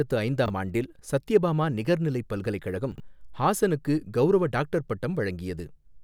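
A speech clip with two brief garbled stumbles, at 0.46 to 0.5 s just before "ஆண்டில் சத்யபாமா நிகர்நிலைப்" and at 2.92 to 3.0 s before "ஹாசனுக்கு கவுரவ டாக்டர்". These are chunks out of order: a 20 ms chunk played one chunk late, then three chunks late, leaving hard joins.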